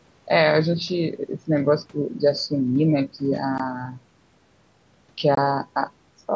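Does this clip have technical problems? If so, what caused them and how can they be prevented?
Yes. At 3.58 s the speech drops out in a short, hard-edged hole, and a second runs from 5.35 to 5.38 s. This is unconcealed Bluetooth headset packet loss: voice packets from the headset were lost and replaced with silence. The 15 ms and 22.5 ms gaps fit two and three missing 7.5 ms mSBC frames. Keeping the headset close to the phone with a clear radio path, or using a Bluetooth stack with packet loss concealment, would prevent it.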